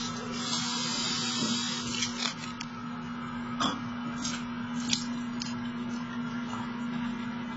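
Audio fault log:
Throughout: AAC compression. The encoder likely had far too few bits for the material, which fits AAC-LC at around 16 kbps. It dropped the upper band entirely, leaving nothing above 7.7 kHz, and quantised what remained coarsely enough to damage it heavily. The sound is dull and muffled, with smeared transients, a watery warble on sustained parts, and a fizzy, hollow texture where the coding has gaps in the spectrum.
1.88 to 2.76 s: cable scratch noise. A worn cable or connector was likely disturbed, so its contact resistance fluctuated rapidly while the signal passed through it. The fluctuations add a dense, irregular crackle that sits over the sound for just under a second, at roughly 10 dB below the programme level. It comes across as scratching or rustling laid over the audio, then stops once the contact settles.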